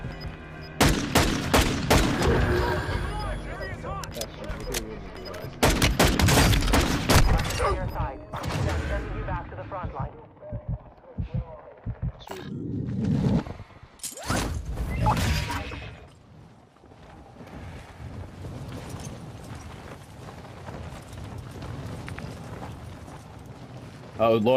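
The sound has DAB burbling at 0.47 to 0.64 s, 4.97 to 5.14 s and 18.97 to 19.65 s. Short noise blips appear as residual bit errors upset MP2 sub-band levels.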